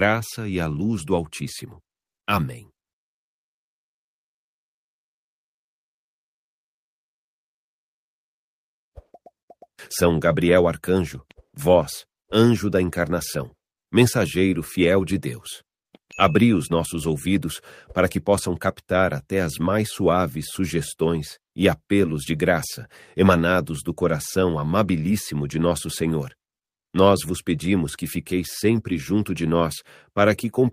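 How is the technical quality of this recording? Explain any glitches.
No technical glitches can be heard anywhere in the recording, and the signal holds steady throughout without any interruption or disturbance.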